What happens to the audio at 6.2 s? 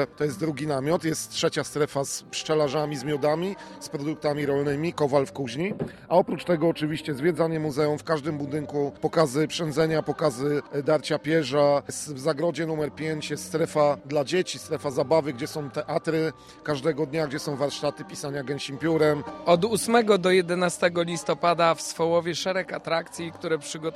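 From 5.61 to 7.55 s, channel delay (comb filtering) makes the sound hollow and phasey. One channel arrives a few samples late, a fraction of a millisecond, and the mono sum cancels at evenly spaced frequencies from around 7 kHz upward. Unlike a low-pass roll-off, the top end returns between these fixed notches.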